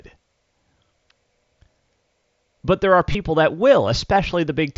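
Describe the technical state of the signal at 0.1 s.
At 0.1 s the speech is intact, with nothing beyond the light band-limited graininess of the Bluetooth mSBC headset codec it passes through.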